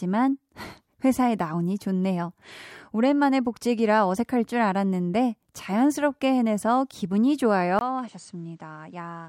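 At 7.79 s the speech breaks for a 20 ms gap, then continues to the end about 10 dB quieter, with nothing above 9 kHz and a new background noise sitting roughly 45 dB below the speech. The lost top end gives the rest of the clip a duller tone. The input was likely switched to a poorer device, such as another microphone or a headset's call profile, whose narrower band, level and noise floor take over from that point.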